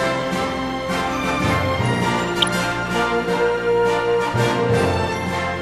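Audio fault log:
throughout MP2 compression: The sound is dull and dry at the top, with a gurgling, grainy roughness running under it. The likely cause is MPEG Layer II coding at a low rate, which fits something around 80 kbps. The encoder divides the spectrum into 32 equal sub-bands and shares out too few bits, so upper bands drop out and return from frame to frame while the remaining bands are quantised coarsely, leaving a plainly audible texture.
2.32–2.57 s DAB burbling: For about a quarter of a second the audio breaks into burbling. Corrupted bits have slipped past error correction into the Layer II stream, and the damage points to a bit error rate well under one percent, enough to spoil 13 frames. Bad samples put short blips of noise into single sub-bands, and bad scale factors make sub-bands jump in level for up to a frame, giving that churning sound.
2.70–2.88 s loose connector crackle: Just after the burbling, a short irregular burst of crackle and scratching lasts a little under 0.2 s. 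A worn or dirty contact is making and breaking rapidly as it shifts, chopping the signal on and off many times in quick succession. Each break and reconnection is an abrupt edge, and any DC offset on the line turns those edges into pops, so the burst sounds rough and uneven rather than like a steady tone.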